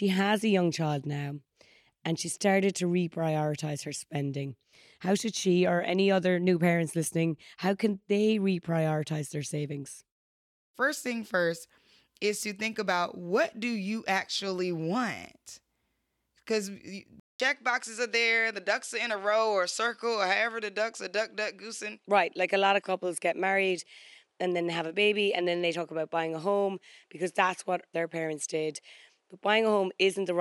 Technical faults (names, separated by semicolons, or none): input switched to a poorer device